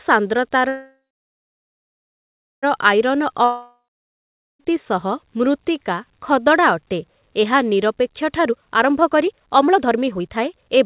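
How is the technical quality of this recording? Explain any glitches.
The recording has three clear glitches, all typical of audio carried over a call connection. Nothing is heard above 4 kHz, which fits a narrowband codec such as G.711 A-law at 64 kbps.

From 0.68 s to 2.65 s there is a call audio freeze. Packets were most likely held up in transit, so the jitter buffer ran empty. The receiver stretched the last sound into a fading buzz, and about 1.65 s of that stretch is silence. When the packets arrived, the audio resumed where it had stopped. This inserted roughly 1.95 s of delay but lost nothing.

From 3.44 s to 4.70 s a long network dropout occurs. Audio stopped arriving, likely because of a network interruption, and about 1.16 s of it was never played. The receiver again continued the last sound as a decaying buzz that falls to silence for around 0.82 s. When the sound returns, it has jumped ahead past the missing section.

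From 8.39 s to the end, a jitter buffer speed-up is audible. The buffer had built up more audio than its target, so the receiver repeatedly cut out tiny pitch-period slices to reduce the delay, removing about a second in total. The speech runs at about 136% speed with its pitch unchanged and sounds noticeably rushed.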